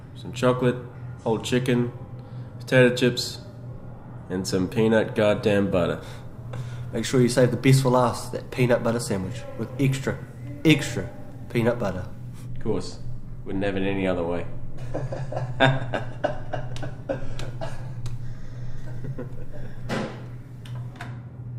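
No technical faults are audible.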